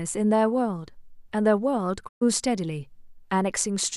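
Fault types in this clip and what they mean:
Digital broadcast dropout: from 2.07 to 2.23 s the speech fades out over about 20 ms, sits in silence, then returns, with roughly 120 ms of programme missing. The receiver stopped getting usable frames, either because the signal was lost or because frames failed their checksum, so it muted its output until valid data arrived again. The gap's length fits about five lost frames, and whatever was transmitted during it is gone rather than delayed.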